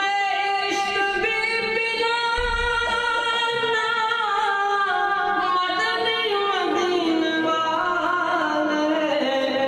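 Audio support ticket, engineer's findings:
Nothing to flag here, as I couldn't find any audible fault anywhere in the recording.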